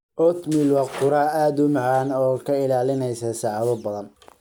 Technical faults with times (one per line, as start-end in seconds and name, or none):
none